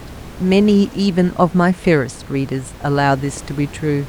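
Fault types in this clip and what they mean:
No technical faults can be heard in this recording.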